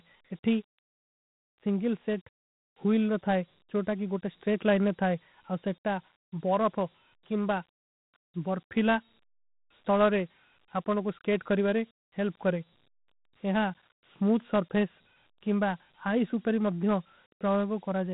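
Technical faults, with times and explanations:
Throughout, Dialogic VOX ADPCM: speech stops sharply near 3.9 kHz, a flat ceiling on a spectrogram that fits 32 kbit/s coding at 8,000 samples a second. Coarse 4-bit steps leave gritty hiss riding the speech, seen as grainy fill below that ceiling.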